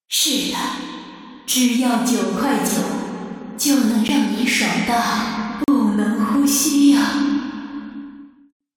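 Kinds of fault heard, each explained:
Block of digital silence: a sharp tick at 4.08 s, then a brief hole from 5.64 to 5.68 s, lasting 40 ms. Each time a run of samples drops to silence and returns without any fade.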